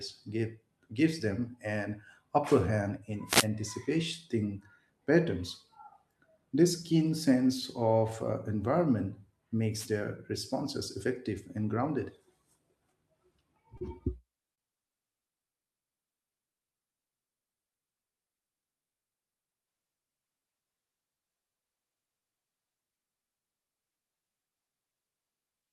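Two wireless microphone noise hits, at 3.26 to 3.48 s and 9.72 to 9.89 s, come through as brief swishes of static laid over the speech. The radio link from the analogue FM microphone faded as reflected signals cancelled, so receiver hiss rose and broke into a rough burst. What separates this from a digital dropout is that the speech keeps running underneath the noise rather than cutting out.

At 13.77 to 13.83 s and again at 14.55 to 14.60 s there is a short stall from a late packet. Each time, the jitter buffer ran dry and the receiver held the last sound for about 32 ms and then 29 ms before the speech resumed. Each stall shows up as a stretched sound, and no speech is lost. It differs from packet loss because speech picks up exactly where it stopped, only later, with the delay growing by the held amount each time.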